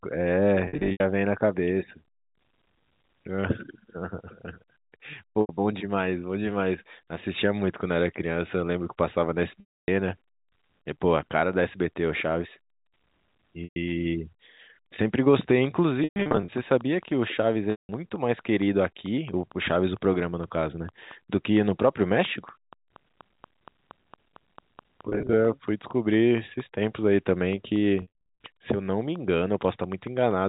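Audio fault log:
0.66–1.00, 5.41–5.49, 9.60–9.88, 13.64–13.76, 16.04–16.52, 17.71–17.89, 25.09–25.33, 28.02–28.23 s: packet loss with pitch repetition. Between 80 and 300 ms of audio goes missing in each span. The receiver repeats the last pitch period, giving brief held, buzzy stretches that fade when gaps run longer.
15.41–30.32 s: train of clicks. Regular ticks at about 4.4 per second, roughly seventy in all, peak near the signal's level and are audible in pauses. The likely cause is interference from nearby equipment.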